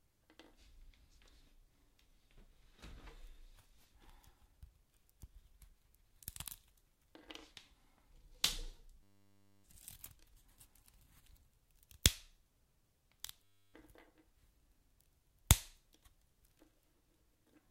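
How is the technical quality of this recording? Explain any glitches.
The recording has two system hang loops. From 9.03 to 9.64 s, and again from 13.44 to 13.74 s, the audio collapses into a steady buzz at 100 Hz. A driver or system freeze left the hardware replaying one roughly 10 ms buffer, dropping around 0.7 s and 0.3 s of real audio.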